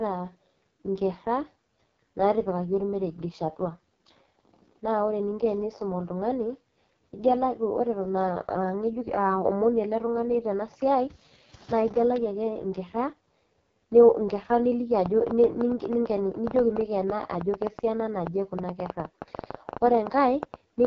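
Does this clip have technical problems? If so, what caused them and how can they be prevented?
Yes. AMR wideband (HD Voice) codec damage runs throughout. The speech sounds rough and raspy, with nothing above 7.1 kHz, which fits the codec's lowest 6.6 kbit/s mode. To prevent it, use 12.65 kbit/s or higher.

A train of clicks runs from 15.06 s to 20.86 s. About fifty irregular pops, roughly eight per second, rise around 10 dB above the speech, likely from electrical interference or a faulty connection. To prevent it, shield or separate cabling and check the audio interface.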